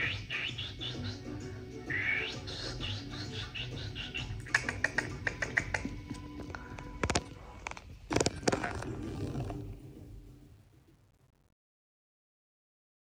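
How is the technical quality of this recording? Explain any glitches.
The recording has one glitch, in the closing fade-out. From 9.15 s to the end, truncation distortion on the fade turns gritty, worst after 9.47 s: the fade keeps too few bits without dither, consistent with roughly 10-bit resolution.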